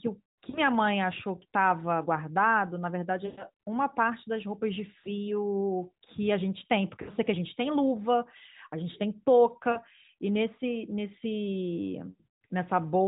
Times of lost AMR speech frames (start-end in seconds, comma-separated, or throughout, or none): 0.50-0.59, 3.26-3.44, 5.00-5.07, 7.02-7.11, 9.72-9.81, 12.10-12.24